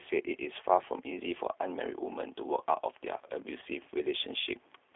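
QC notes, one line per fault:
Throughout, G.729 codec: the audio sounds squeezed into a phone band of roughly 300 Hz to 3.5 kHz, with a rough, slightly synthetic edge that's plainly audible. That fits G.729A at 8 kbit/s, which doesn't carry the waveform itself. It rebuilds each short frame from a vocal tract filter, a pitch predictor and a handful of pulses, so the fine detail and top end are lost and the speech takes on that coarse, buzzy texture.
3.61 to 3.64 s, VoIP packet loss concealed by the speech codec: there's a brief smeared patch where the speech briefly thins out and recovers. The gap is consistent with a single lost 10 ms frame. The decoder fills it by extending its last pitch and filter settings at lowered gain. Because each frame builds on the previous one, the damage spreads a little past the gap, so the blip lasts about 30 ms rather than 10.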